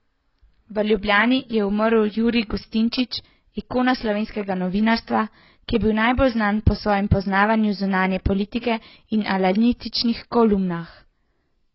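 Speech, and the whole thing sounds dull and smeared, with nothing above about 5.6 kHz. Sibilants come out fizzy and sustained sounds have a warble. That's the signature of heavy AAC compression, likely AAC-LC at a very low rate, and the damage fits something around 16 kbps. At that budget the encoder drops the top of the spectrum entirely and quantises what's left so coarsely that bands turn grainy or hollow. There's also a pre-echo from 8.61 to 8.63 s, right after "po svojem poznavanju zunanje". A sharp onset lands late in a transform block, and the quantisation noise sized for that loud moment spreads back over the quiet stretch before it. You get a brief hiss, about 23 ms long, ahead of the attack, and the attack itself loses its edge and sounds softened.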